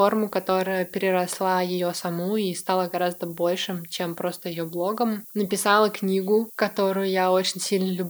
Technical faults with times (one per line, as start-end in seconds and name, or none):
0.00-8.10 low bit depth with noise shaping